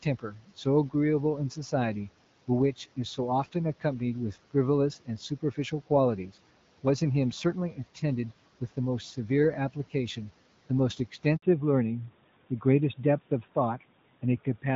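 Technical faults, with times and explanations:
0.03–0.65 s: speech cut by the noise suppressor. The suppressor misread parts of the opening speech as background and pulled them down with the room noise by about 12 dB at the deepest point. In total, roughly a fifth of a second of sound is affected, scattered across this stretch. Soft onsets and the tails of syllables come out thin and swallowed, as if the gain briefly ducked under them.
11.36 s: handover gap. For 60 ms no speech frames arrive while the call is passed from one network link to another. The sound dies away almost immediately and stays silent until the new link starts delivering audio. Whatever was said in that window is simply absent.
11.42 s to the end: fallback to narrowband. Right after the handover gap, the call stops using wideband HD Voice, with its bandwidth up to about 7 kHz, and continues on an older narrowband codec. 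The sound points to AMR-NB at around 12.2 kbit/s taking over from AMR-WB at 12.65 kbit/s. Nothing above 4 kHz survives, so sibilants and breath lose their brightness. The speech turns duller, boxier and rougher from this point on.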